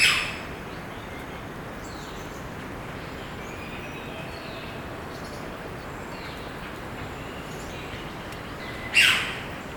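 Sudden jumps in the sound come at 1.56 s, 6.12 s and 8.56 s, skipping about 40 ms, 40 ms and a longer 100 ms or so. These are likely dropped buffers (overrun): unread samples were overwritten, and the surrounding audio was spliced together without a gap.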